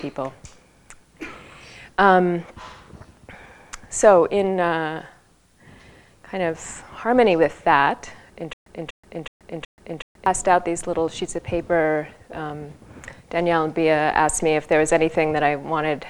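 From 8.53 to 10.26 s, a stutter with silent gaps: a 242 ms burst repeats four times, with 130 ms of digital silence after each. This is likely a stalled stream replaying its last fragment. The waveform shows identical blocks between flat lines, and the spectrogram shows matching slices separated by blank columns.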